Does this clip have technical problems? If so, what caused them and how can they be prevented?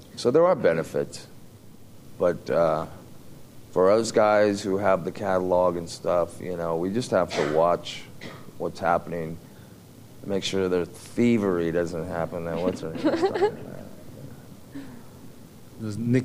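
No, nothing stood out as a technical problem on listening, so there is nothing here that calls for prevention.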